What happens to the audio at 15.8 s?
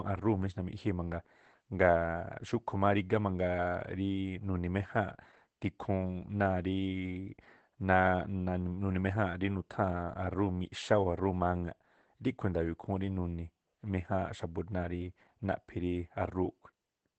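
At 15.8 s the speech sounds muffled, a little hoarse and faintly robotic, with the dull, boxed-in quality of a voice squeezed through a narrow channel. This is Opus voice compression, present for the whole clip rather than starting at that moment. The coder is running in its SILK linear-prediction mode at wideband, keeping content only up to about 8 kHz, and coding the excitation coarsely in 20 ms frames. The plainly audible damage fits a low rate of about 12 kbps.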